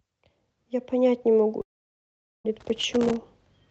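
From 1.61 s to 2.46 s the speech breaks off. The last sound is stretched into a fading buzzy tail, and then close to silence remains until the audio resumes, with roughly 0.84 s of material gone rather than delayed. This is most likely a long network dropout. No packets reached the receiver for that stretch, so its concealment extended what it had until there was nothing left to extend, and playback then continued from later audio.

Between 2.60 s and 3.16 s an irregular burst of crackle and scratching sits over the signal. This is loose connector crackle. A worn or dirty contact in the analogue chain was making and breaking rapidly, chopping the signal into fragments, and each jump in any DC on the line added a click. The call codec on this path limits the band to about 8 kHz.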